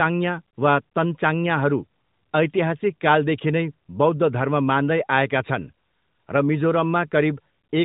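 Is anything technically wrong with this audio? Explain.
No, nothing technically wrong stood out on listening to this speech.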